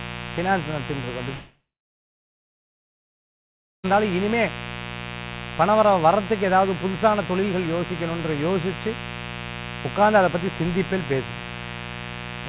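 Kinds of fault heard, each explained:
Mains buzz: Switching spikes from the 60 Hz supply leak in twice per cycle, producing a raspy buzz only about 10 dB below the sound for the whole clip. A spectrogram shows evenly spaced horizontal lines at multiples of 60 Hz, climbing to the 4 kHz band edge.
Long network dropout: From 1.34 s to 3.86 s the audio likely stopped arriving. The last sound stretches into a fading buzz, then about 2.2 s of near-silence follows before the audio resumes with 2.5 s lost. The waveform shows a flat gap, the spectrogram a blank block.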